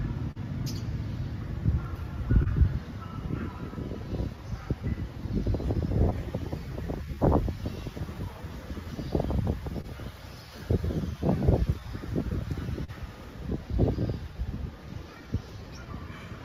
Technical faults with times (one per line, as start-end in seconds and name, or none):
0.00-16.45 clock drift between sender and receiver
0.31-0.38 short stall from a late packet
1.48-12.25 repeated timing corrections
2.43-2.48 short stall from a late packet
9.81-9.86 short stall from a late packet
12.84-12.90 short stall from a late packet
14.29-15.86 repeated timing corrections